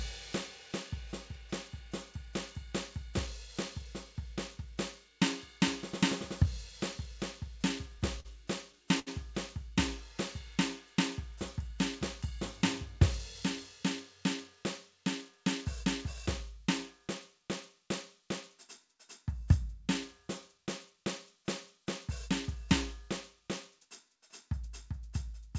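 At 8.20 s and again at 8.99 s the music hits a short stall from a late packet: a packet arrived after it was due and the jitter buffer ran dry, so the receiver stretched the last sound for about 44 ms, then 73 ms, before carrying on, with nothing lost but the sound held slightly too long. A spectrogram shows smeared horizontal bands there, beneath the flat 8 kHz ceiling of the G.722 call path.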